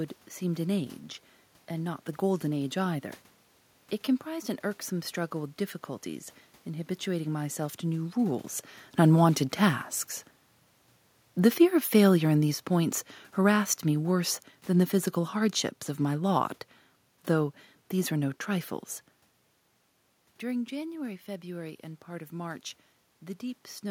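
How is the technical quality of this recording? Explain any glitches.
One glitch stands out: the automatic gain falling from 11.36 to 16.47 s. The gain control judged the input too loud, or its background noise too strong, and eased its gain down by about 5 dB across those five seconds, so the speech sinks gradually, and the room noise beneath it drops by the same amount. The level shifts near 8 s and near 19.5 s come from the talker moving relative to the microphone.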